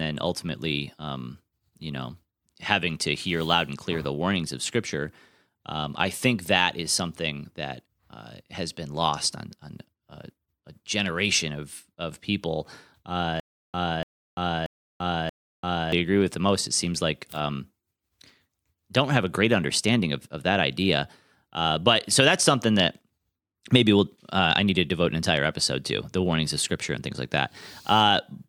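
Speech; from 13.40 to 15.92 s a 290 ms burst repeats four times, each followed by 341 ms of silence. This stutter with silent gaps is likely from a stalled stream.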